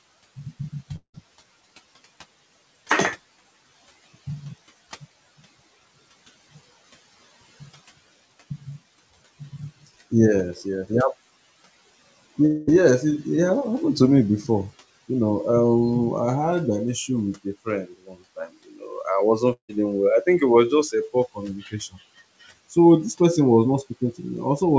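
At 0.96 to 1.16 s the sound breaks off. A fading buzz carries on for a moment, then about 90 ms of silence follows. Roughly 180 ms of audio never returns. This is likely a long network dropout, with the receiver stretching the last sound to cover the gap. The same happens at 12.46 to 12.69 s, just before "yes it." That gap is about 220 ms and is filled entirely, with no silence. A third gap comes at 19.53 to 19.71 s, just before "well I think it." About 160 ms is lost there, and the last 100 ms is silent.

Between these, at 17.89 to 18.15 s, just after "an issue with a", the speech is cut by the noise suppressor. It mistakes parts of the speech for background and lowers them by up to about 12 dB, across roughly 150 ms. Those sounds come out swallowed and faint. It happens again at 18.36 to 18.82 s, with a drop of about 13 dB over roughly a tenth of a second.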